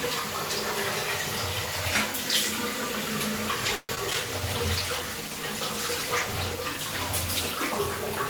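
Repeated packet loss (robotic sound) from 3.75 to 4.16 s: four gaps, the longest 135 ms, are patched by extending prior sound, so about 41% is concealed and choppy.

Call bitrate drop from 4.21 s to the end: the encoder falls from 64 to 18 kbps, staying lowest for 2.45 s, making the sound coarse, watery and muffled.

Jitter buffer slow-down from 4.40 to 5.03 s: repeated pitch periods add 50 ms, running the audio at 93% speed, drawn out at unchanged pitch.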